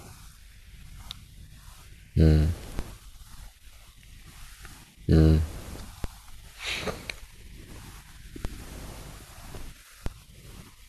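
At 2.79, 6.04, 8.45 and 10.06 s the speech carries a DC step: the waveform's zero line jumps by about -17 dBFS and then decays away through a 20 Hz high-pass. Each step gives a low thump or click while the speech itself continues unbroken.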